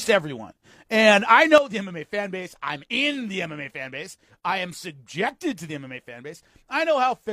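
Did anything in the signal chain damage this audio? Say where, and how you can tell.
Yes. A sudden gain jump hits at 1.58 s, right after "everyone and I", and lasts to the end: the sound and background noise both fall by about 9 dB in a single sample, with no fade. That points to a digital gain stage, likely a setting or bit shift applied without a ramp.

An overlap between stream segments appears at 2.88 to 2.92 s: about 40 ms of audio goes missing and the waveform jumps, heard as a click or tiny skip. This happens at playback, where overlapping timestamps on segments of about 4 s made the player discard audio that was never duplicated.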